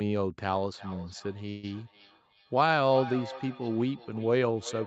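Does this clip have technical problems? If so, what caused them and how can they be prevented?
Yes. From 0.54 s to the end there is feedback echo between two devices. The speech returns roughly every 0.4 s, about 15 dB below the speech. A second device in the room replays the call and its microphone resends it. Keep only one device joined per room, or use headphones.

From 1.49 to 1.65 s there is a call audio freeze. A 136 ms fill of buzz or hiss is inserted and the audio resumes without loss, likely from delayed packets draining the jitter buffer. A steadier network connection prevents it.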